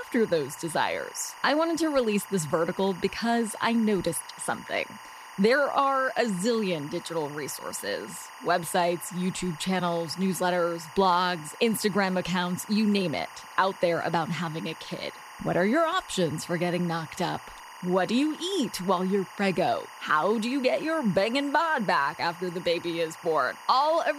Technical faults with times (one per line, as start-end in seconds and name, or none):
0.00-24.19 timecode bleed